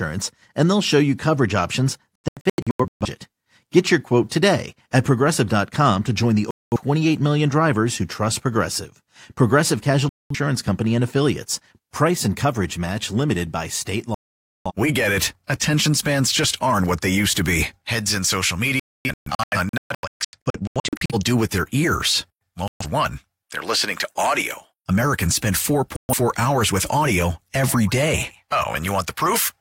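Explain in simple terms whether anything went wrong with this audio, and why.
Digital broadcast dropout strikes seven times in this speech: the receiver lost good signal, muted, and the speech sent meanwhile is gone for good. The gaps fall at:

2.16–3.06 s, in short holes after "show you coverage options"
6.51–6.77 s
10.09–10.36 s
14.14–14.72 s
18.80–21.15 s, broken into several holes between "be heads in social" and "do with their ears"
22.68–22.86 s
25.96–26.15 s, just before "hours with audio every"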